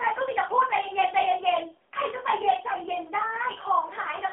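From start to finish the speech has that AMR narrowband mobile codec sound. The band is squeezed to roughly the 300 Hz to 3.4 kHz phone line, with nothing at all above about 3.5 kHz, so it's thin and boxy. The damage is heavy: the codec is rebuilding the voice from a vocal-tract model fed by sparse pulses, and at this low rate that gives a buzzy, synthetic edge, which fits a low AMR-NB mode around 6.7 kbps.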